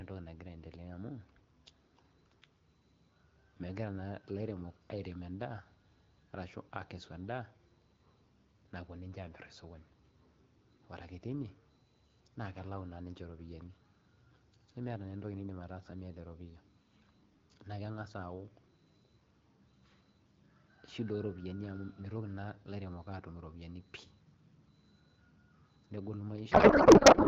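A codec payload misread runs from 26.51 s to 27.27 s, the very end of the recording. The speech, carried over AMR wideband and clear up to that point at what sounds like 12.65 kbit/s, abruptly turns into garbled noise and warble that barely tracks the talker. The decoder is still receiving well-formed frames but pulling parameters from the wrong bit positions, which fits octet-aligned AMR packing being read as bandwidth-efficient.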